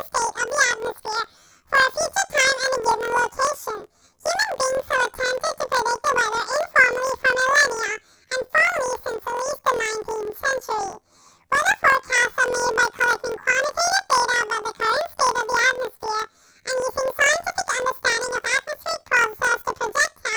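Throughout the speech, planar audio read as interleaved: each block of about 23 ms, which fits 1024-sample blocks, plays twice at double speed, left then right. That gives an octave-high pitch fluttering at 43.1 Hz, yet the overall pace stays normal, unlike a simple speed error.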